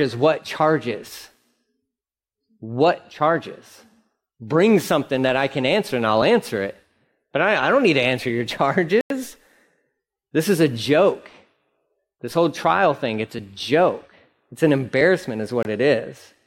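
Speech with two blocks of digital silence, at 9.01 to 9.10 s (about 93 ms, fitting a 4096-sample block) and 15.63 to 15.65 s (about 23 ms). Each drops out and back abruptly, not with a fade, pointing to unfilled output buffers.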